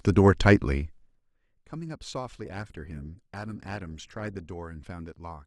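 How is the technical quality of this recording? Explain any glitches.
The speech carries two faults. From 0.81 to 1.24 s, zipper noise: a fall of about 20 dB is stepped in 2 dB jumps, roughly twenty per second, rather than being smoothed. Each jump ticks audibly, shows as a staircase envelope on the waveform, and appears as thin vertical lines on the spectrogram.

From 2.45 to 4.45 s, the adaptive stream drops to a lower bitrate. Codec artefacts thicken abruptly, with no gap, which points to Opus falling from about 64 to 16 kbit/s.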